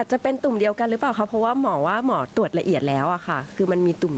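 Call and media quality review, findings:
Gain pumping, throughout the clip: level swinging around 10 dB. Likely cause: mic input gain far too high, fast limiter/compressor clamping every peak. Dynamics flattened, speech squashed.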